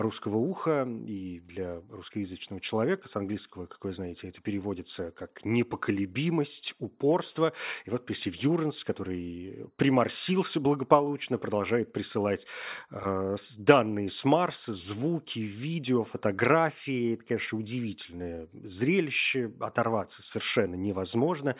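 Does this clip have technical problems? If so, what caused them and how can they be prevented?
No, nothing in the recording points to a technical fault, so there is no cause to trace and nothing to prevent.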